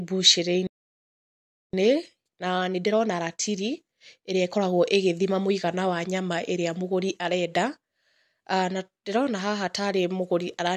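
At 0.67 s the speech cuts out mid-flow and the output stays silent for about 1.06 s, resuming at 1.73 s where it left off. This playback stall is likely the player running dry of buffered data or its output thread being held up. From 1.73 s to 4.73 s the speech runs hurried, about 1.1 times normal speed, yet its pitch stays put. This is time-compressed catch-up: the player trims small slices and cross-fades across the joins to clear the backlog left by the stall.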